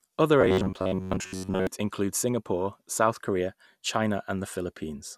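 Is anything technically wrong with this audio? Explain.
Yes. Robotic sound from repeated short buffers, 0.41 to 1.67 s: the speech turns into a rigid metallic buzz near 94 Hz, likely from an 11 ms chunk replayed while new audio arrived late.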